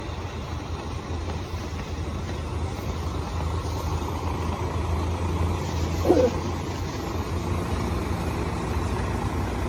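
Throughout, the audio sounds swirly, hollow and smeared, with blurred attacks and nothing above 18.6 kHz. This is generation loss, likely from roughly fifteen repeated AAC re-encodes.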